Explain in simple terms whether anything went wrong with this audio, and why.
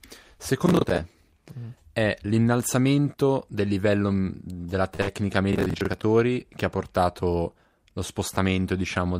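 Processor overload crackle appears at 0.66 to 0.98 s and again at 5.53 to 6.03 s. The computer fell behind on small chunks of roughly 10 ms, repeating old audio, so the speech sounds gritty.

A short stall from a late packet holds the sound at 4.95 s for 38 ms. The receiver waited, stretching the last sound, and nothing was lost.

A burst of packet loss follows at 5.01 to 5.09 s. About 60 ms of speech never arrived and was papered over with a fading fill, then speech jumps ahead.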